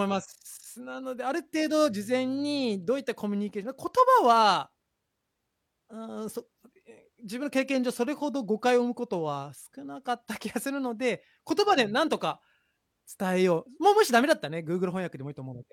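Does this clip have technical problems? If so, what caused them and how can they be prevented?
No, no technical problems heard.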